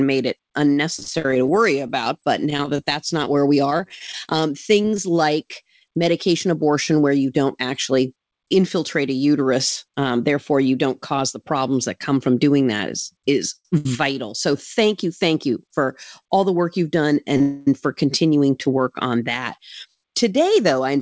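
Right after "made it", from 0.95 to 4.99 s, there's repeated packet loss with a robotic sound. Dozens of tiny holes, none longer than 36 ms, get patched by continuing the previous sound, so it comes out choppy until "like medication abortion where".

From 12.65 to 12.93 s there's a jitter buffer speed-up. The receiver snips out a few pitch periods, very roughly 40 ms in total, to drain excess buffered audio, so things briefly run about 11% fast at the same pitch.

From 13.56 to 14.54 s, just before "thank you thank", you get repeated stalls, a stutter. The buffer runs dry three times and the receiver holds the last sound, up to 85 ms at once. Nothing goes missing, but it drags.

At 17.37 to 17.41 s there's a short stall from a late packet. The last sound is stretched for 31 ms until the packet turns up, giving a held moment with a slight buzz or dip.

That rolls straight into a call audio freeze from 17.41 to 17.68 s, between "the work you've done" and "for continuing to work". 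A fading hold of the last sound fills about a quarter second, and the audio then picks up where it stopped. The likely cause is packets held up in transit.

Finally, from 19.41 to 20.97 s there's another jitter buffer speed-up. Around 150 ms is trimmed, so the ending sounds hurried at about 8% over normal speed.

Throughout, nothing is heard above 8 kHz, which fits the G.722 call codec.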